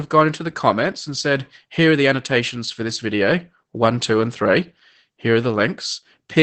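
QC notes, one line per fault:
Throughout, Opus voice compression: the speech has a muffled, slightly hoarse and faintly robotic character, and nothing comes through above about 8.6 kHz, so the top end is simply gone. The sound points to a low rate, around 12 kbps, with Opus running its SILK speech coder in wideband. At that rate SILK squeezes the band down and describes the excitation coarsely, which strips the breathy detail and leaves that rough, synthetic edge on the voice.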